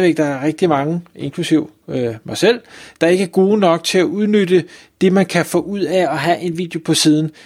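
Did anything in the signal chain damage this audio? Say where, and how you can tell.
Yes, right after "man kan få ud", 5.92 to 6.63 s: speech runs 5.85% fast, about a semitone sharp, then snaps back. Likely a buffer-level drift correction step.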